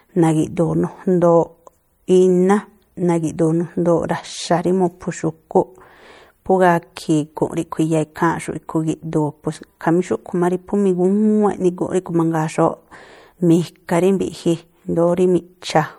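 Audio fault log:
throughout, MP3 compression: an MP3 encoder short of bits, consistent with a 64 kbps stream, is the likely cause. It drops weak frequency lines that flicker between frames, giving a plainly audible watery swirl and smeared onsets, while nothing sits above 21 kHz.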